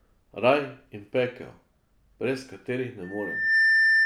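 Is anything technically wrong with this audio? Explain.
Yes. From 3.03 s to the end at 4.06 s there is loudspeaker feedback squeal: the microphone is picking up its own loudspeaker, and at 1.8 kHz the loop gain passes one, so that tone feeds on itself. It swells over about half a second into a piercing whistle roughly 10 dB above the speech.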